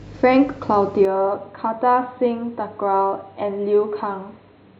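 At 1.05 s this speech recording abruptly turns dull and boxy, losing everything above 4.2 kHz, dropping a few decibels in level and gaining a faint new background hiss, with no gap, to the end. The input likely switched to a poorer device.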